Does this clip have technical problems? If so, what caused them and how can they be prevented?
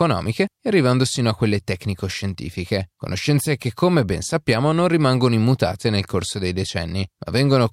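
No, there are no technical problems to hear in this clip. There is nothing to trace back to a cause and nothing that needs preventing.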